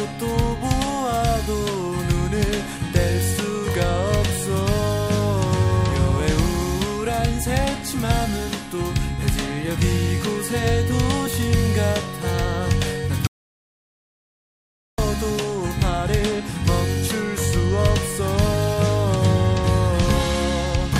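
The input signal was most likely lost for a moment, through a dropped connection or an unintended mute, while recording carried on writing silence. The result is an audio dropout to silence from 13.27 s to 14.98 s: the sound stops abruptly, leaving about 1.7 s of silence with no room tone, and then resumes mid-flow. Whatever occurred in that gap is unrecoverable.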